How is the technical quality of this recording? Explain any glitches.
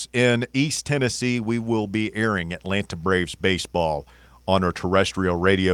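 No technical faults are audible.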